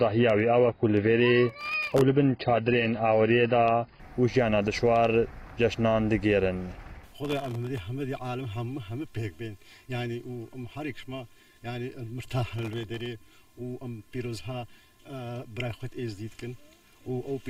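Adaptive stream starting at a low bitrate, 0.0 to 4.0 s: the player opens on a thin, low-bitrate version with nothing above 5.1 kHz, which fits roughly 16 kbit/s AAC. It then steps up cleanly, with no gap, to a fuller stream consistent with about 96 kbit/s.

Processor overload crackle, 1.50 to 2.01 s: tiny audio buffers of well under a millisecond miss their deadlines in a run, each leaving a hard-edged silent gap. The result is a gritty burst of crackle riding on the sound. The same tearing returns at 7.25 to 7.78 s and 12.59 to 13.06 s.

Channel delay (comb filtering), 7.13 s to the end: one channel lags by about 3 ms before the mono sum. Content shared by both channels cancels at evenly spaced notches starting near 150 Hz, leaving the sound hollow and phasey.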